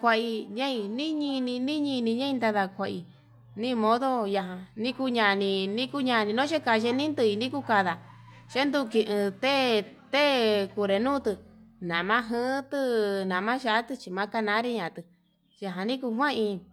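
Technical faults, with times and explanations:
No technical faults can be heard in the speech recording. There is nothing to list by time.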